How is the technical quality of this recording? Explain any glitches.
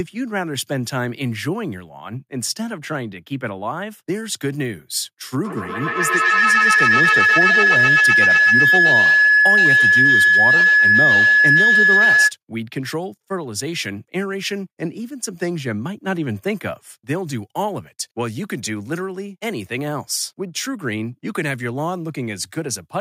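The recording has one serious fault. From 5.44 to 12.35 s, feedback howl builds: a microphone-to-loudspeaker loop gains on each pass, so a tone around 1.5 kHz grows to about 9 dB above the speech. The loop repeats roughly every tenth of a second, and the howl shows as a bright horizontal band on a spectrogram and a swelling envelope on the waveform.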